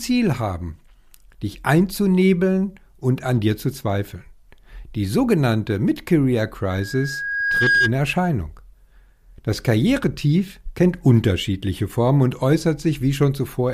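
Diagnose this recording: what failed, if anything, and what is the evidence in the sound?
Loudspeaker feedback squeal occurs in the analogue acoustic path, before any conversion. From 6.70 s to 7.93 s a single steady tone at 1.6 kHz rises under the speech. It swells over roughly a second and peaks at about 5 dB above the speech level. The microphone was hearing the loudspeaker it fed. At 1.6 kHz the loop gain passed one, so that frequency fed on itself and grew.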